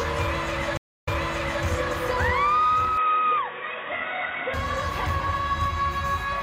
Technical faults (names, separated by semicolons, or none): stream reconnect; input switched to a poorer device